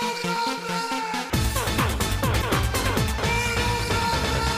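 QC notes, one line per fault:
2.39–2.44 s: damaged data in a compressed stream. A short glitch cuts into the sound for about 44 ms. Corrupted bytes in the compressed data make the decoder misread those frames and lose sync until it finds the next valid frame header.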